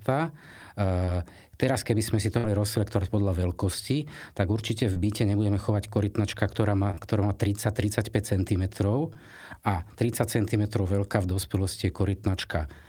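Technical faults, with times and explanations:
1.05–1.10, 4.93–4.97, 6.91–6.99 and 9.13–9.17 s, short concealed packet loss: about 20 ms per event never arrived. The decoder extended the preceding sound and blended back, giving brief smears, before "teraz keby sme si" and twice back-to-back before "ktorá má".
2.38–2.45 s, burst of packet loss: about 60 ms went missing. The receiver continued the last sound while fading it, producing a held buzz or fading hiss before the audio resumed later.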